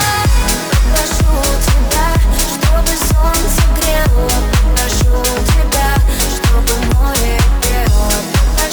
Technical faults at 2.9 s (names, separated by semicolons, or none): crude rate conversion